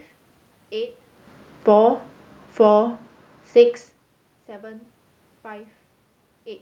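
From 1.55 to 3.5 s, automatic gain falling pulls the level down by about 5 dB. Unlike a talker moving, the room noise sinks along with the speech.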